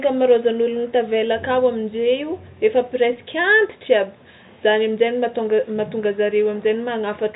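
No technical faults occur in this speech, which is carried over G.711 telephone coding with nothing above about 3.8 kHz.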